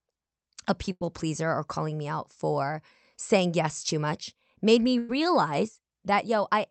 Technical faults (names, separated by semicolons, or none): burst of packet loss; jitter buffer speed-up